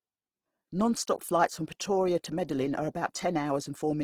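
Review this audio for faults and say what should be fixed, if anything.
Throughout the speech, the sound is grainy, rough and noisy rather than muffled, pointing likely to Opus compression in its CELT mode at a low rate that fits about 16 kbps. Starved bands are filled with folded or noise energy. A spectrogram shows full bandwidth, but harmonics break into speckled noise instead of clean lines. Encoding at a higher bitrate, around 32 kbps or more, would prevent it.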